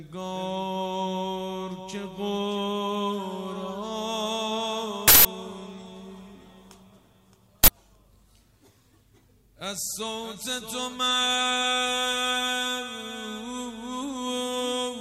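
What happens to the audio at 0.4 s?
Nothing goes wrong at 0.4 s; the audio there plays through intact, with no dropout, click, distortion or other fault.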